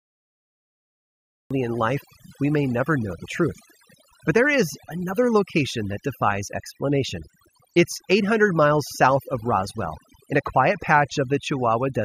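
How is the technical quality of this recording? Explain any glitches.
The technical quality is poor, with two faults. The first 1.51 s are digital silence, and the speech then starts abruptly mid-sound at 1.51 s. This is a cut-off start from a recording or stream that began late. It shows as a flat waveform jumping straight to full level with no attack or fade.

Overdone noise removal runs throughout. Aggressive reduction switched off bands near the estimated noise floor, leaving near-silent gaps with twinkling specks. On a spectrogram this appears as scattered isolated dots and a hollowed-out, patchy voice.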